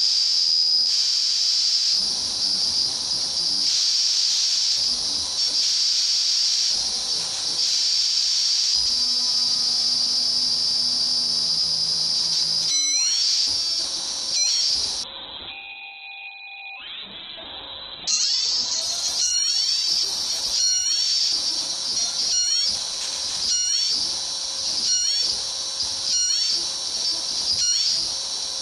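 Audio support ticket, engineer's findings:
Call bitrate drop, 15.04–22.39 s. Bandwidth estimate fell and the encoder was starved, with highs cut from 20 kHz to 4 kHz. Audio is rough and muffled, worst for 2.5 s.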